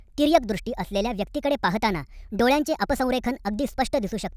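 From start to end, the speech runs too fast and too high. This is a wrong sample rate fault. The audio plays about 1.45 times faster than recorded, raising pitch about 6.5 semitones. That fits 22 kHz audio played at 32 kHz without conversion. Voices sound chipmunk-like and rushed.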